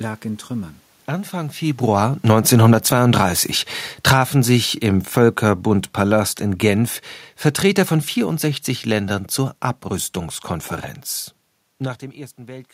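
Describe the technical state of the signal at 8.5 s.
At 8.5 s the signal is intact, with no technical fault present, only the room noise that belongs to the recording itself.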